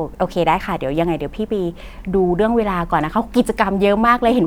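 A short speech recording with no technical faults to point to in the signal at any point.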